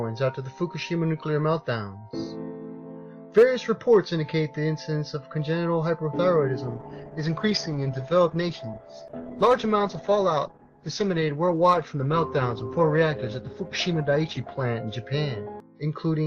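From 6.6 s to 14.6 s the sound abruptly takes on more codec artefacts, then snaps back without any gap. This is an adaptive stream at a lower bitrate, consistent with Opus dropping from about 64 to 16 kbit/s for those eight seconds.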